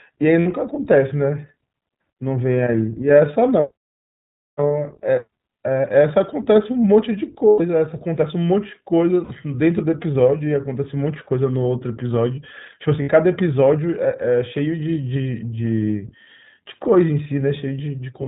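Across the whole recording the speech sounds clear but slightly rough and synthetic, with nothing above 4 kHz and a narrow, telephone-like band. This is the iLBC codec, a narrowband VoIP coder working here at 15.2 kbps in 20 ms frames. It codes each frame's excitation independently of the previous frame, and its damage is plainly audible in the grainy, artificial texture.

Four brief interruptions follow, each heard as a held, slightly buzzy or breathy vowel sound before the voice snaps back to normal. These are lost iLBC frames. The first, at 0.40 to 0.48 s, lasts about 60 ms. The second, at 7.48 to 7.62 s, is the longest at about 120 ms, which fits six missing 20 ms frames. The other two, at 9.24 to 9.32 s and 13.02 to 13.09 s, each last about 60 ms. In each gap the decoder fills in by repeating the last pitch cycle mixed with noise. Because every iLBC frame stands alone, clean speech returns almost at once after each loss.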